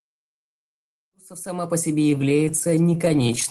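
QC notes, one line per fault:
1.99–3.49 s, repeated stalls (stutter): starting right after "ресурсов сама по", the audio keeps catching and dragging to the end of the clip. Packets reached the receiver late or slower than playback consumed them, so the jitter buffer kept running dry, about 40 times in this span, each gap no longer than about 17 ms. The receiver bridged every gap by extending the last sound, which fills roughly a quarter of the span. Nothing is lost, but the flow stutters.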